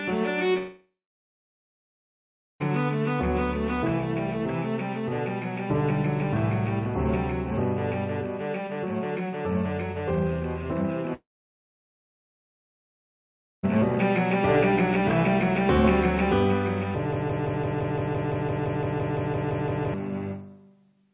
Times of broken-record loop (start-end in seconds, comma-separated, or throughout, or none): 17.13-19.94